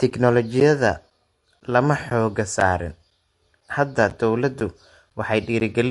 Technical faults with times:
0.00-5.90 MP3 compression
0.10-5.61 periodic USB or driver dropouts

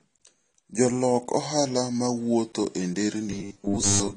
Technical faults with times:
0.00-4.16 transcoding between lossy codecs
3.31-4.16 robotic sound from repeated short buffers

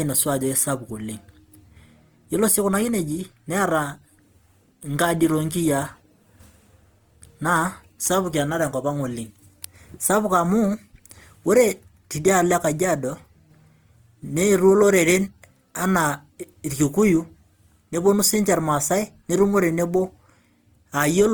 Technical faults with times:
0.00-21.33 Opus compression

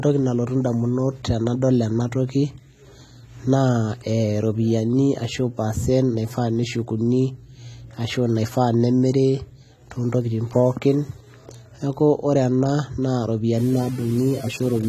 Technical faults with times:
0.00-14.89 AAC compression
13.58-14.89 low bit depth without dither

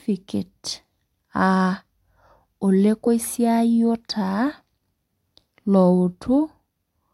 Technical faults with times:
none

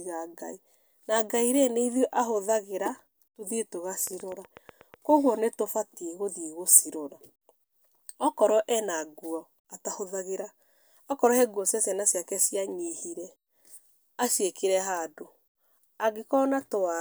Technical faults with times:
4.07-4.95 train of clicks

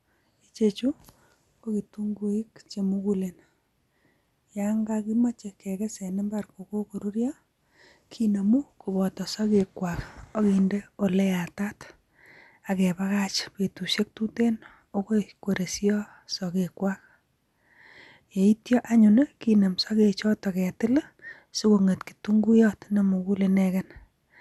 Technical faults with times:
0.00-24.41 MP2 compression

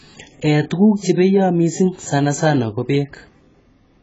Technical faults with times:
0.00-4.02 AAC compression

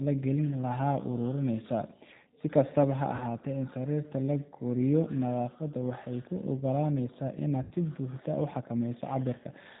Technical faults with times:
0.00-9.80 G.729 codec
3.16-3.23 VoIP packet loss concealed by the speech codec
7.63-7.74 VoIP packet loss concealed by the speech codec

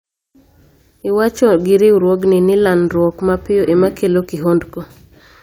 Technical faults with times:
none

